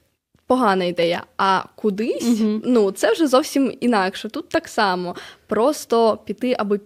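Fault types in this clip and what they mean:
The speech in this recording comes through with a steady, continuous signal and nothing audible pointing to a technical problem in the chain.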